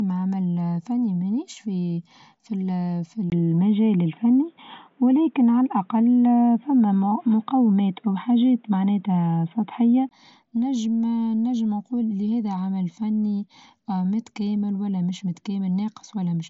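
Input switched to a poorer device, 3.3 to 10.11 s: after a brief gap, speech turns boxy and cut above 3.8 kHz, likely from a different microphone.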